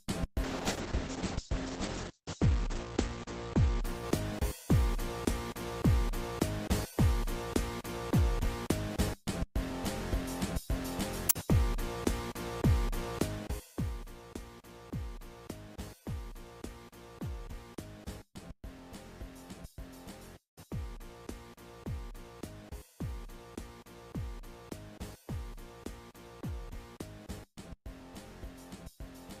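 From 0.45 to 5.61 s a call bitrate drop cuts coding from 64 to 9 kbps, bandwidth narrowing from 20 kHz to 8 kHz. The sound turns muffled and watery, unlike plain filtering's clean dullness.

From 13.16 to 14.12 s zipper noise appears: a roughly 10 dB fade applied in 1 dB steps, around fifteen per second, ticking audibly, unlike a smooth fader move.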